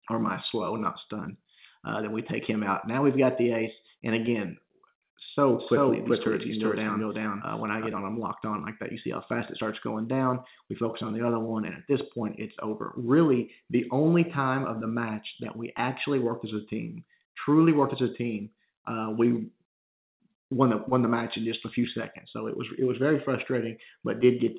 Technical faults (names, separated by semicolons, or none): doubled audio track